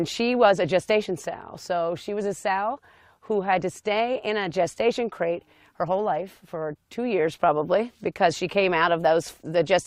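Nothing in the audio stood out as a technical problem on listening.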